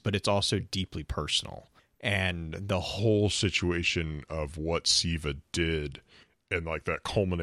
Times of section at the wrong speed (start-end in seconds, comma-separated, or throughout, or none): 2.99-7.42